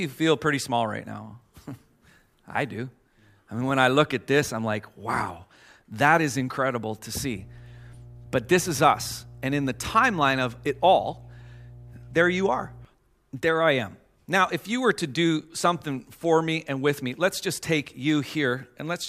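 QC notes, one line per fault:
7.16 to 12.85 s, mains hum: a steady 60 Hz drone with a few low harmonics comes in under the speech, sitting roughly 20 dB down. It sounds like a ground loop or a nearby transformer leaking the power line into the signal path for that stretch.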